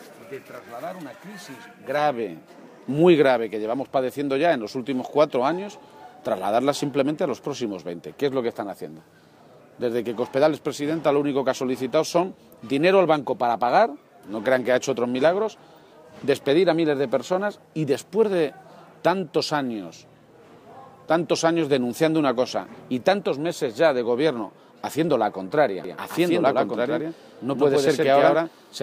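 At 25.84 s a doubled audio track begins and runs to the end. A second, equally loud copy trails the original by about a tenth of a second. It has no decay or room colour, and it switches on abruptly. It is likely captured again by a slower path.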